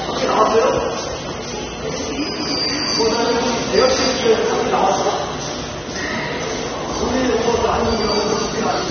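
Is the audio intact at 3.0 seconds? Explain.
No. At 3.0 s, as throughout the clip, nothing is heard above 6.3 kHz, and the damage is plainly audible: the sound is dull and smeared, with a warbling, fizzy texture on sustained parts. This is likely AAC compression at a low bitrate, around 24 kbps. The encoder drops high bands and coarsely quantises the rest. A simple low-pass filter would also remove the top, but it would leave the remaining sound clean, without this warble.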